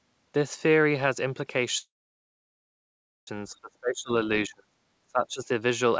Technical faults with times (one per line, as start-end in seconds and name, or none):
1.78-3.29 call audio freeze
3.44-4.11 speech suppressed in double talk
4.46-4.77 speech suppressed in double talk
5.05-5.49 speech suppressed in double talk